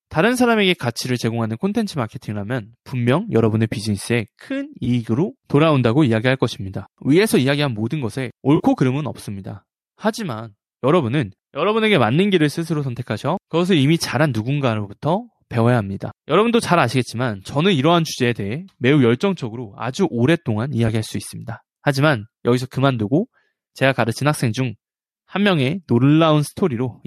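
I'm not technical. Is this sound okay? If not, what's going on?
No. There are three brief AAC frame loss with concealment dropouts: small chunks of the compressed speech never arrived, so the decoder guessed at them from what came just before. Each sounds like a quick smeared or noisy blip, at 4.85 to 4.88, 8.56 to 8.62 and 20.88 seconds. The speech likely passed through low-delay AAC compression, the kind used on video calls.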